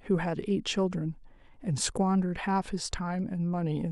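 No technical faults can be heard anywhere in the speech.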